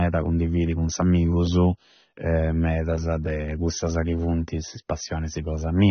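Throughout, nothing sounds above 6.3 kHz and sibilants warble and fizz, unlike a clean low-pass. This is likely AAC compression, fitting a bitrate around 24 kbps.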